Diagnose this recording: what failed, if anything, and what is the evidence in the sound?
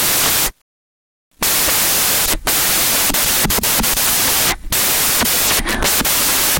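The failure is at the sample-format conversion stage: the samples are built from the wrong bytes for the entire clip. The reader combines each sample's bytes wrongly, whether offset by a byte, in swapped order or with the wrong alignment, so the rapidly changing low-order bits end up as the most significant part of every value. The result is broadband noise in place of the intended sound. On a spectrogram, energy smears across the whole frequency range with no clear structure. The waveform looks dense and noise-like throughout.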